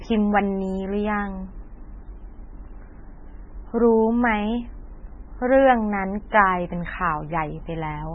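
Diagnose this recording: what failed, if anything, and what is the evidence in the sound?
The failure is at the codec stage, and the likely cause is heavy MP3 compression. It runs through the whole speech clip. Nothing is present above about 8.7 kHz, so the treble stops at a hard ceiling. The sound is watery and swirly, s sounds turn metallic and chirpy, and consonant attacks smear. The encoder was short of bits, which fits a very low bitrate near 16 kbps. It dropped the upper band and zeroed weak frequency lines, which flicker on and off between frames.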